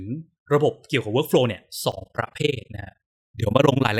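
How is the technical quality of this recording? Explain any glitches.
The second half of the recording has one clear technical fault.

Overlap-add ripple runs from 1.92 s to 3.92 s. The speech was split into windowed frames and rejoined with an overlap that doesn't sum to a steady gain, so the level swings by about 60 dB around twenty times a second. It sounds like a harsh, rough flutter over the speech.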